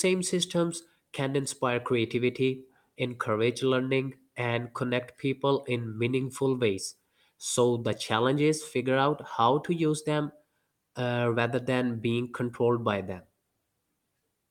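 No technical faults are audible.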